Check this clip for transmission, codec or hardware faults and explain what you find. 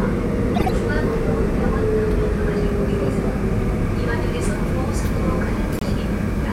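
Two codec faults are audible, both from damaged compressed frames, but the decoder handles them in opposite ways.

From 0.55 to 0.70 s there is a corrupt frame decoded. Flipped bits reached the decoder, which played the damaged data anyway, so misread gains and codes put energy at frequencies where the sound had none. The result is a harsh burst of chirping noise lasting about 150 ms, peaking at about -10 dBFS, which fits a short run of consecutive bad frames. Unlike a muted frame, this adds loud, wrong content rather than removing any.

From 5.75 to 5.83 s there is a corrupt frame muted. The decoder rejected the damaged frames and the player put silence in their place, so the sound drops out abruptly for about 86 ms, which fits three frames being discarded. It is a clean hole rather than a garbled burst, and it differs from a buffer dropout because timing is kept: the sound resumes exactly where it should, with nothing delayed or skipped ahead.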